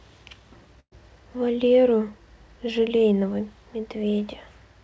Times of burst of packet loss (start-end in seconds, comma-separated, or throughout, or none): 0.80-0.93